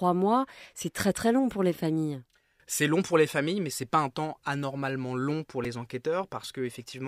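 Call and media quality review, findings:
Repeated buffer at 5.65 s: playback device starved of new audio, replayed its last buffer twice more. Each copy about 2.9 ms, fitting a 128-sample buffer; hard joins give a brief click-buzz, with roughly 5 ms of real audio lost.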